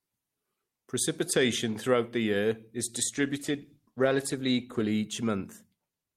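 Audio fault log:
3.17–5.01 s, call bitrate drop: the speech turns coarse and grainy, and stays at its worst for about 1.78 s before clearing near 5.01 s. The call's bandwidth estimate fell and the encoder was told to spend far fewer bits, so each frame is coded more crudely. The change in detail fits a fall from roughly 48 kbps to about 18 kbps, then a recovery.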